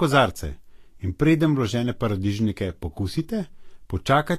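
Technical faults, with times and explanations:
throughout: Vorbis compression. The speech has a plainly audible hissy, grainy treble with nothing above 14.2 kHz, and consonant attacks sound blurred. The likely cause is Vorbis encoding at a low rate, one that fits about 36 kbps. The codec keeps a smooth spectral floor but quantises the high-frequency residue so coarsely that fine detail becomes noise of similar energy. A simple low-pass filter would only dull the top end. Here the band below the cut-off is also roughened.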